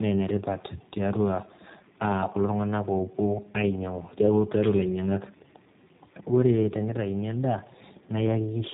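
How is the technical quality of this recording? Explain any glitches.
The quality is rough, with one fault running through the whole clip: tandem speech coding. The speech passed through two low-rate speech codecs in a row, likely an iLBC stage then a G.729A-style one, the second re-coding the first's damage. It sounds muffled, gritty and warbly, with nothing above about 3.8 kHz.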